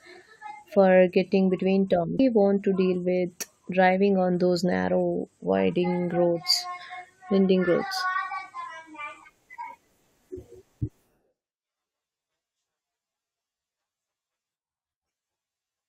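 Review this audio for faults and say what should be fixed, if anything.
Stream segment skipped at 2.18 s: the speech jumps abruptly forward with a small blip, likely because one chunk of a segmented stream failed to arrive and the player continued with the next one, leaving that stretch of programme absent. Prevent this by retrying failed segment requests and buffering enough ahead that the player waits for them rather than skipping.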